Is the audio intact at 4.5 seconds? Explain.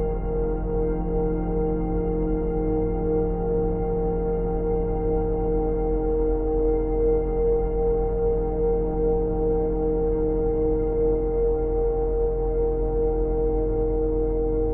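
Yes, the audio is intact at 4.5 seconds, with no dropout, click, distortion or other fault audible at that point.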